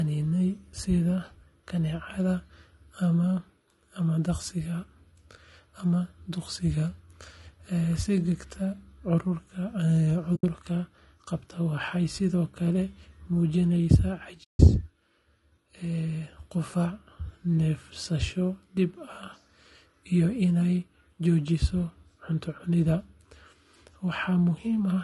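Throughout the clip the speech has been through what is likely low-delay AAC compression (AAC-ELD). Its short frames capture the pitch harmonics poorly, and the plainly audible damage fits a low rate of around 32 kbps. Voices sound rough and grainy, with noise between the harmonics and a thin, synthetic top band.

At 10.35 to 10.44 s and again at 14.43 to 14.61 s, AAC frame loss with muting occurs. The decoder zeroes the missing audio, leaving soft-edged holes of about 80 ms and then 160 ms.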